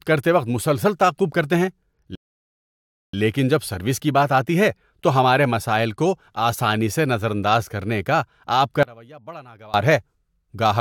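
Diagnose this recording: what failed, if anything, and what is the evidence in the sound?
Playback ran dry, a rebuffering stall: after "مسلسل تعاقب کرتے ہیں" the speech cuts to silence from 2.15 to 3.14 s, adding about 0.98 s, then resumes intact at "لیکن جب سروس کی".

One channel inverted, likely a reversed wiring polarity: from 8.83 to 9.74 s, after "کرنے کا آپ کا", the centred speech cancels in the mono sum and drops about 24 dB, leaving a faint residue.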